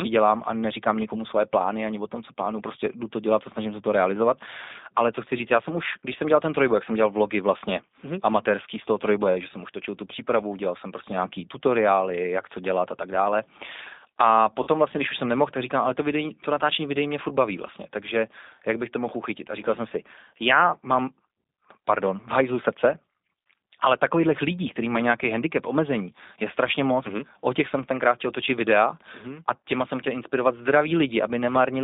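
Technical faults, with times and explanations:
Throughout: G.729 codec. The speech is confined to a telephone band of roughly 200 Hz to 3.7 kHz, with nothing above. The coding damage is plainly audible as a rough, slightly synthetic texture. The decoder rebuilds each 10 ms frame from a vocal tract filter, a pitch predictor and a few fixed pulses rather than the original waveform, so fine detail is lost. This fits G.729A at about 8 kbit/s.
14.63 to 14.69 s: VoIP packet loss concealed by the speech codec. About 40 ms of audio went missing, which fits two lost packets. The decoder filled the gap by extending the last pitch period and filter shape with decreasing gain, so the speech briefly turns into a stretched buzzy tone or coloured noise that fades. Because each frame is predicted from the previous one, the distortion persists a little past the gap until the decoder state recovers.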